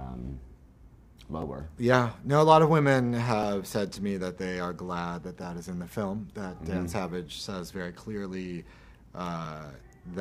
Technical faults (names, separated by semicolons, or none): overlapping chunks